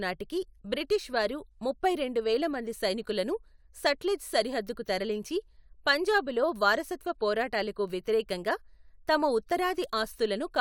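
Nothing in this recording points to a technical fault.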